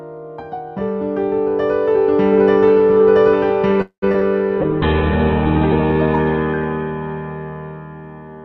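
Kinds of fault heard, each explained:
Call audio freeze: Packets were likely held up in transit and the jitter buffer ran dry, so from 3.81 to 4.04 s the receiver stretched the last sound into a fading buzz, ending in near-silence, before resuming where it stopped, adding a 0.21 s gap.
Short concealed packet loss: Twice, around 4.12 and 4.20 s, a few hundredths of a second of the call never reached the decoder in time. The receiver covered each hole by extending the preceding sound and blending back, heard as brief smears.
Call bitrate drop: The bandwidth estimate collapsed and the encoder fell from 64 to 8 kbps, bottoming out for about 1.2 s. From 4.63 to 8.23 s the coding turns coarse and watery, and the top end narrows from 20 kHz to 4 kHz, sounding muffled.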